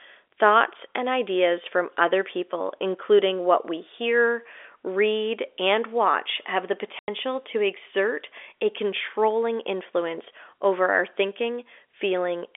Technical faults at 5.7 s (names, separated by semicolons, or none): none